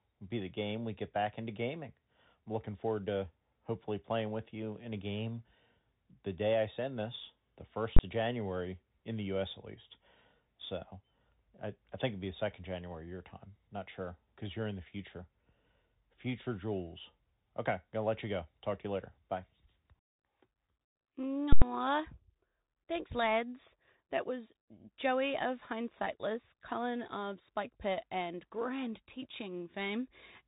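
Speech recorded through a Bluetooth CVSD headset codec, with plainly audible damage throughout. Nothing above about 3.8 kHz survives, so the sound is narrowband and dull. CVSD sends one bit per sample to say whether the waveform steps up or down, consistent with a 64 kbit/s stream. Because the step size adapts more slowly than loud, fast high-frequency content rises, those sounds fall behind and distort, sibilants come out scratchy, and a granular hiss sits under the speech. There are also two invalid numbers at full scale events, where a calculation produced infinite or invalid values that were forced to maximum amplitude for a whole processing block. Right after "I send this the", from 7.96 to 7.99 s, the event is short enough to merge into a single loud bang, which fits a 1024-sample block. From 21.53 to 21.62 s the longer block gives a very loud pop at onset and offset with no sound between, pointing to a 4096-sample block.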